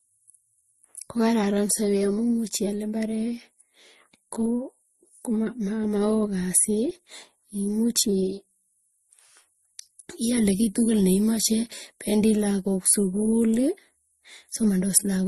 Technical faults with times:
0.00-15.27 transcoding between lossy codecs

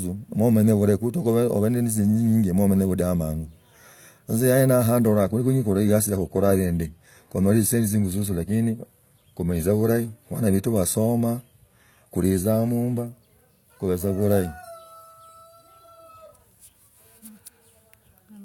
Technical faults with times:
5.06-13.06 adaptive stream at a lower bitrate

